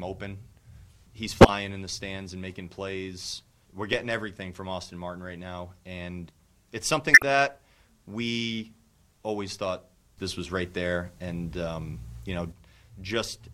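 Short bursts of corrupt frame decoded artefacts occur at 1.41 to 1.49 s, 3.93 s and 7.14 to 7.22 s. Damaged compressed frames were decoded regardless, so misread gains and codes throw energy into the wrong frequencies, giving chirps and noise blips peaking near about -5 dBFS, and about -10 dBFS at 3.93 s.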